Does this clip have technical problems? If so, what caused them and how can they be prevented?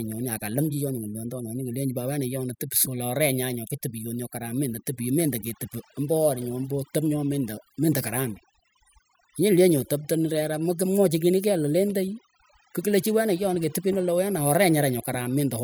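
Yes. Overdone noise removal runs throughout the speech: a noise reducer set too strong pulls individual frequency bands down whenever they sit near its noise estimate, taking quiet parts of the voice with them, so the background drops and breaks up into twinkling specks. To prevent it, use gentler reduction settings and judge the result by ear before committing.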